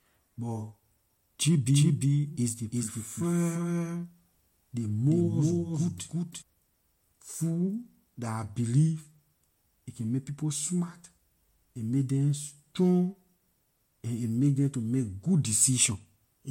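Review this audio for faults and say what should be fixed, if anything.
From 1.74 s to 6.42 s the speech plays twice: a second copy at about the same level trails the original by roughly 0.4 seconds. The copy is full-band and dry, with no decay or room colour, and it starts and stops abruptly at both ends of that span. This is a doubled audio track, likely the same signal picked up a second time through a slower path and mixed back in. To prevent it, make sure each source reaches the mix through only one path.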